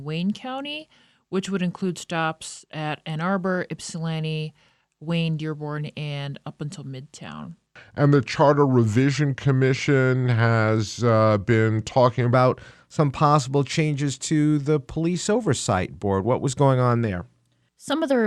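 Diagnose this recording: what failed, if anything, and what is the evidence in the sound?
A section at the wrong speed runs from 0.00 to 12.34 s. The speech plays at 0.893 times its recorded rate. It sounds slow and deep, about two semitones low. The likely stage is playback, fitting the audio to the wrong clock.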